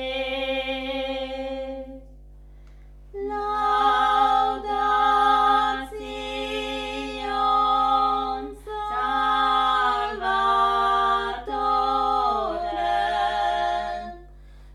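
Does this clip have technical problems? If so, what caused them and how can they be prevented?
Yes. Mains hum runs through the whole clip. It is a steady low tone at 50 Hz, with some low harmonics above it. It sits roughly 20 dB below the main sound. The power line is leaking into the signal path. A ground loop between connected devices or a nearby transformer is the usual route. To prevent it, use balanced cables, a single common ground point, and keep audio lines away from power supplies.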